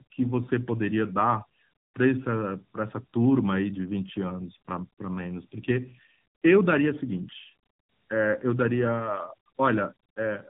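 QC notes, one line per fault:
Throughout, tandem speech coding: the speech sounds rough, muffled and warbly, which points to two AMR-NB narrowband coding stages with a plain telephone-rate link between them. Each coding stage re-encodes the output of the previous one, so the artefacts compound. On a spectrogram, nothing appears above 3.8 kHz, and the harmonics look smeared and unsteady from frame to frame. The waveform envelope looks grainy rather than smooth.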